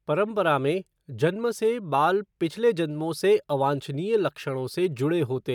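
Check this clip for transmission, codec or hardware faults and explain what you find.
Nothing in the recording stood out as a problem on listening.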